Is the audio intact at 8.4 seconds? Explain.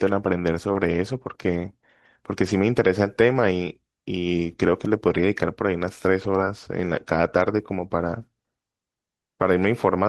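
Yes, at 8.4 seconds the speech is intact, with no dropout, glitch or distortion; only the call path's ordinary coding, with high frequencies ending around 12 kHz, is present.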